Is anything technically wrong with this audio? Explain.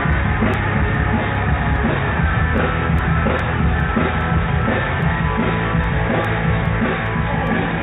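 Yes. From 0.13 s to 7.47 s, sharp ticks of uneven strength recur about every 0.4 s, roughly twenty in all. These are word clock ticks. The receiving device isn't locked to the sender's clock and drifts by around 50 ppm, so each time the two clocks slip, a single sample is dropped or repeated.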